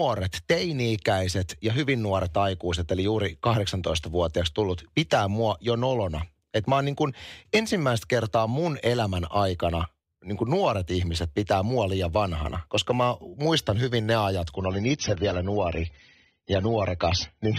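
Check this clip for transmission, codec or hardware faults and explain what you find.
One transmission fault. From 14.55 s to the end at 17.58 s, the adaptive stream drops to a lower bitrate. The treble cuts off abruptly above 6.3 kHz and codec artefacts thicken, which points to a fall from roughly 96 to 24 kbit/s AAC. Unlike a dropout, the quality switches instantly with no gap.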